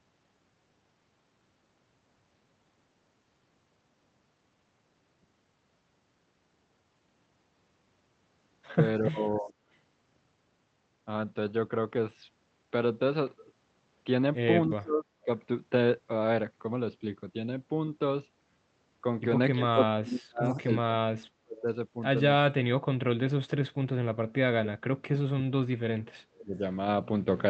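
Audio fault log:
9.01–9.55, 14.67–15.29, 19.53–21.67, 24.25–26.61 s: speech suppressed in double talk. Speech dips by about 25–40 dB or drops out in pieces, likely because the echo canceller muted both overlapping talkers. On the waveform the envelope sags, and the spectrogram shows faded or blank bands.
20.56–20.63 s: echo leak. A faint copy of speech about 295 ms late, around 35 dB below the voice, likely from uncancelled loudspeaker pickup. It appears as a weak, delayed spectrogram trace.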